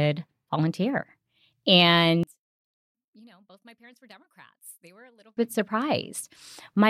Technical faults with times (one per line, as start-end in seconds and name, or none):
2.23-5.37 one channel inverted